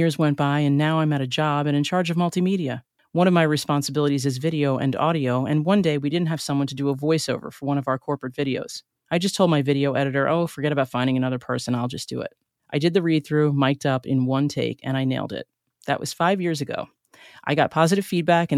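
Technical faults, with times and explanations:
No technical faults can be heard in this recording.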